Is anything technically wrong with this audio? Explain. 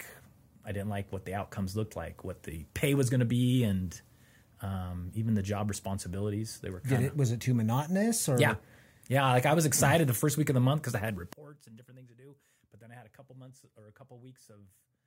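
Yes. One channel inverted, likely, from 11.33 s to the end: reversed polarity cancels the shared centre in mono, leaving the speech about 23 dB quieter.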